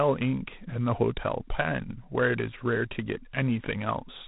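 G.726 ADPCM damage runs throughout this speech: a harsh, level-following rasp and nothing above 3.9 kHz, which fits 3-bit coding at 24 kbit/s.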